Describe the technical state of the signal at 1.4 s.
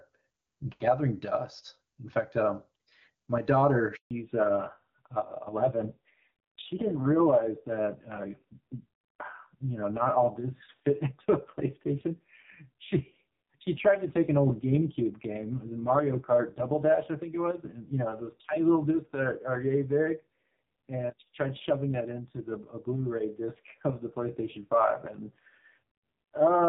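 At 1.4 s the speech is intact, carried cleanly through the AMR wideband (HD Voice) codec at 23.85 kbit/s with at most faint coding traces.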